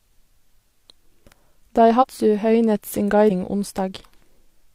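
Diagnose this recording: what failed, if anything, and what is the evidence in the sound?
Codec stage: compressed frames skipped. The speech jumps ahead at 1.98–2.05 s (about 40 ms, one frame) and 3.26–3.31 s (about 100 ms, two frames), consistent with roughly 43 ms frames. The spectrogram shows broken formant tracks at each join.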